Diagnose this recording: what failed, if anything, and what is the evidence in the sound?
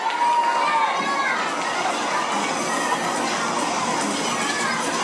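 Everything runs hurried and high from start to finish. The whole clip moves 1.5 times faster than normal, and its pitch sits about 7 semitones up, close to a musical fifth. Because speed and pitch rise together by the same factor and stay constant, this is a wrong sample rate fault at playback. The samples are clocked out faster than they were captured, with no rate conversion, which fits 16 kHz material played back at 24 kHz.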